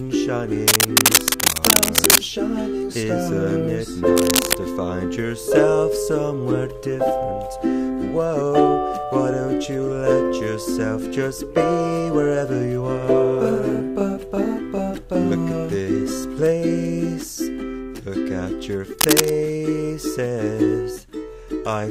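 A worn cable, connector or control being disturbed is the likely cause of the cable scratch noise here. Its contact resistance shifts rapidly and injects dense, ragged noise bursts. The first runs from 0.68 to 2.18 s, a sustained scratchy rustle somewhat louder than the sound beneath it. A shorter burst from 4.17 to 4.55 s sits at about the same level as the audio. A final one from 19.01 to 19.31 s again rises above it.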